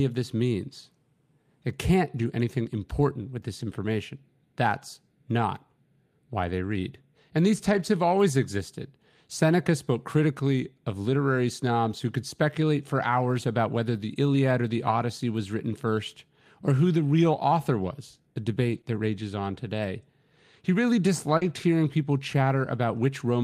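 Through this speech there are repeated lost packets rebuilt from error correction. Opus in-band FEC replays a low-bitrate copy carried in the next packet, so there's no gap, just brief rough, noisy patches. These are at 2.21 s and 3.59 s, then 7.71–7.81 s just before "have always existed", at 13.95 s right after "for hours about whether", at 14.87–14.93 s between "or the" and "was written first or", and at 18.61–18.79 s, the longest at about 100 ms.

Right after that last patch, a short concealed packet loss at 18.81–18.85 s leaves the decoder extrapolating the preceding sound for about 20 ms, so you get a quick smear or wobble. A second concealed loss at 21.37–21.43 s fills about 40 ms the same way. It runs straight into another FEC-rebuilt stretch at 21.41–21.51 s, which makes that spot rough.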